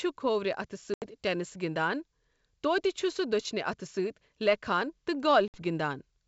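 Packet loss on an ADPCM call strikes twice. From 0.94 to 1.07 s, about 80 ms of packets never arrive and are filled with silence; the decoder's predictor and step size then lag the sender's, so the audio resumes slightly distorted on "ٹینِس گِنٛدان". From 5.48 to 5.58 s, right after "لیکھان تہٕ", a 60 ms gap cuts in sharply and the return is similarly rough before settling.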